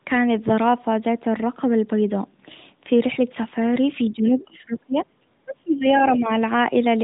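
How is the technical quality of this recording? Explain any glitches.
Two glitches stand out near the end: the speech collapses in level twice, from 4.12 to 5.25 s and again from 5.41 to 6.32 s. The narrowband mobile coding, with nothing above 3.8 kHz, is audible throughout as a band-limited, slightly thin sound. The dropouts are speech suppressed in double talk, likely from an echo canceller that could not separate the near talker from its own loudspeaker echo and attenuated the near talker by roughly 25 dB, for about a second in the first span and most of the second. On a waveform the envelope shrinks abruptly to a sliver. On a spectrogram the harmonics fade or break into patches.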